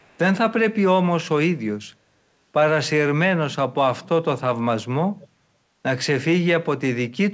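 At 0.00 to 0.18 s, and again at 5.20 to 5.27 s, a faint delayed copy of the speech returns about 431 ms late, very low at first, somewhat louder the second time. This echo leak is likely a far-end loudspeaker pickup slipping past echo cancellation, over a call path band-limited to 8 kHz.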